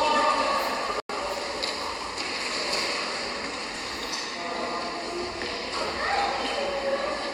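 At 1.00 s the sound drops into a hole of about 0.1 s (to 1.10 s), starting abruptly. That's a corrupt frame muted: the decoder rejected damaged compressed frames and the player filled their slot with silence, which points to a few frames lost, with timing intact.

At 2.85 s and again at 3.76 s there are short errors, peaking at about -19 dBFS and about -23 dBFS. Both are corrupt FLAC frames: flipped bits went unchecked, so the predictor ran on garbage until the next clean frame restored the sound.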